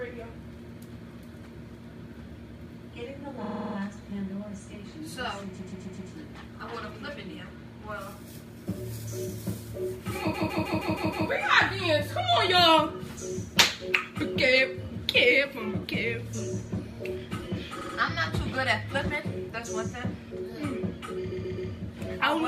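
Repeated frames stutter the sound at 3.44 to 3.75 s, 5.58 to 6.10 s, 10.33 to 11.27 s, 17.80 to 17.96 s and 21.30 to 21.70 s. Each time, a short stretch of compressed data plays again and again. The looped blocks run 52, 131, 157, 78 and 131 ms, each heard 2 to 6 extra times. These lengths suggest whole frames of about 26 ms. Each repeat makes the audio grow longer.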